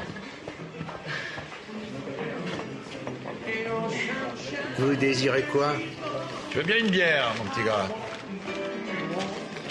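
No technical faults are audible.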